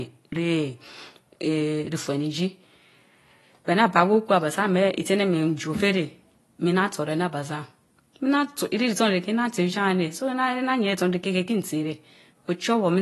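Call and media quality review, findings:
Likely AAC compression at low bitrate, AAC-LC style, throughout. Encoder starving high bands: nothing above 12 kHz, remaining spectrum coarsely quantised, consistent with roughly 32 kbps. Speech sounds plainly dulled and smeared, with warbly, fizzy sibilants.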